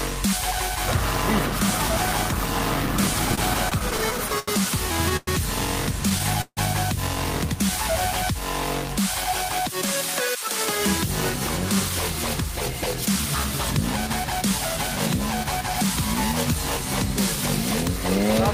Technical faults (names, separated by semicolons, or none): repeated stalls (stutter)